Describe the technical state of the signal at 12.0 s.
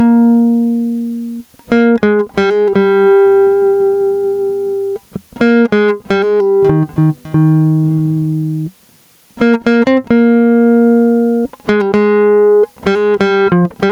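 At 12.0 s the music shows gain pumping, present throughout: likely input gain far too high, with a fast limiter ducking level by around 15 dB on each loud hit. The waveform looks flattened, its envelope dipping and recovering.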